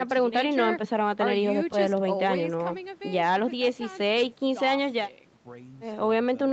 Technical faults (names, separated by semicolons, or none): none